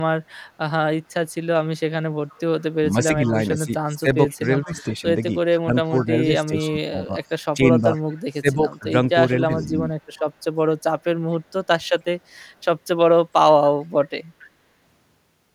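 From 2.29 to 2.64 s there's an echo leak: a faint copy of the speech trailing by 0.454 s, about 30 dB down. It's likely the far end's loudspeaker feeding its mic, with the echo canceller letting residue through.

Between 2.91 and 9.93 s you get speech suppressed in double talk. The talker dips in and out, losing around 15 dB at the worst points, for about three seconds in total. Both sides were talking at once, so the canceller likely ducked everything it couldn't sort out.

The same echo keeps coming back at the 0.454 s delay: 3.95 to 4.83 s at about 30 dB down, 5.97 to 8.21 s at its loudest at about 20 dB down, 9.62 to 12.4 s at about 35 dB down, and a short blip at 14.4 to 14.46 s at about 25 dB down.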